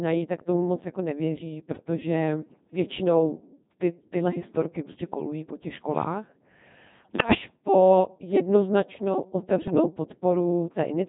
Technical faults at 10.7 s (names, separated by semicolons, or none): Codec 2 vocoder